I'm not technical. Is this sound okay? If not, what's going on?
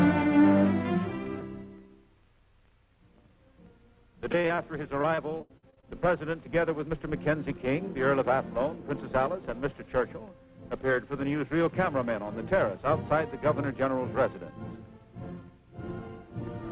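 No. There's repeated packet loss, which gives a robotic sound, from 4.32 to 4.59 s and again from 5.01 to 5.87 s. The audio travels in tiny pieces, and here piece after piece failed to arrive in time. Each hole, the longest about 77 ms, was covered by stretching out the last bit of sound, so those moments come out choppy, with pieces missing. The muffled, phone-like tone throughout comes from the call line itself, which carries nothing above 4 kHz.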